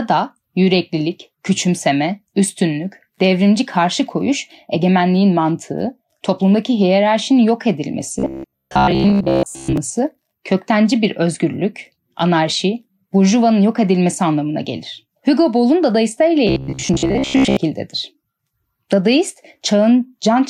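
From 8.19 to 9.77 s, and again from 16.47 to 17.57 s, the speech turns into a rigid, metallic buzz pitched near 66.8 Hz. That's robotic sound from repeated short buffers, likely from a roughly 15 ms chunk looping while most of the real audio gets skipped.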